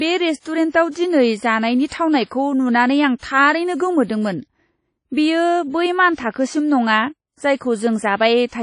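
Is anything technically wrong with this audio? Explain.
Yes. Throughout the speech there is a washy, ringing quality with hiss that swells and fades with the signal, most likely WMA compression. Nothing is present above 10.1 kHz, which fits a low bitrate around 32 kbps. On a spectrogram this shows as a hard ceiling and patchy, blotchy gaps where weak components were zeroed.

At 3.18 s, after "जानायनि थावनायखौ नुनानै आं" and before "थारैनो गोमोदोंमोन", there is pre-echo. Noise sized for the loud attack spreads back through its block, so a short hiss of about 47 ms precedes it and the attack sounds smeared. The waveform shows a fuzzy lead-in before the onset.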